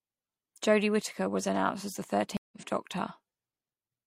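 A dropped connection in this speech recording forces a stream reconnect: the player loses its feed, goes silent, then rejoins and starts a fresh decoder partway through the stream. Between 2.37 and 2.57 s the speech cuts out for about 0.15 s, and when it returns it has jumped ahead by roughly a tenth of a second, so a short stretch of speech is simply missing rather than delayed.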